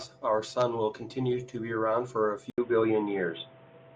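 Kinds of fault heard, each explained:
Input switched to a poorer device: at 2.5 s the speech breaks off for 80 ms, then comes back dull and boxy to the end, with nothing above 3.8 kHz, a noticeable shift in level and a new, fairly quiet background noise. This is likely a change of input to another microphone or a headset's call profile. The silent gap and the new tone, level and noise arriving together set it apart from a plain low-pass filter or codec bandwidth drop, which would narrow the band alone.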